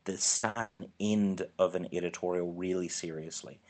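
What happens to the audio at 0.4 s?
At 0.4 s the audio is inside a burst of packet loss, from 0.37 to 0.46 s, followed by a second burst from 0.49 to 0.58 s. In each, the receiver stretched the last received sound across about 60 ms and faded it, so it turns into a held, dulling tone or hiss, then jumps ahead past about 60 ms of missing audio. A spectrogram shows flat, smeared horizontal bands fading out, and the waveform shows a decaying repeated pattern before an abrupt restart.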